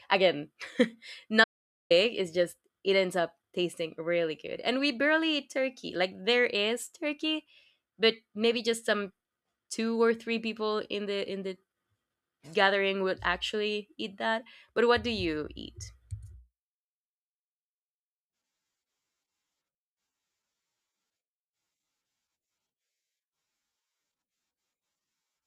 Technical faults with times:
1.44-1.90 audio dropout to silence

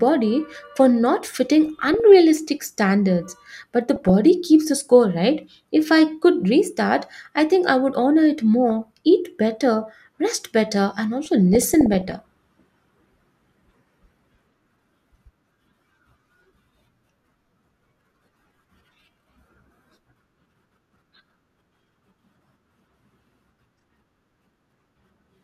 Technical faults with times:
1.66-2.00 DAB burbling
3.96-4.10 DAB burbling
8.70-8.86 DAB burbling
11.25-12.15 DAB burbling

